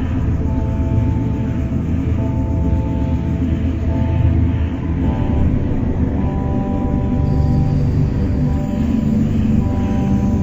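From start to finish it's stereo read as mono: interleaved left and right samples got played back-to-back as one channel, so everything runs at half speed, a full octave low.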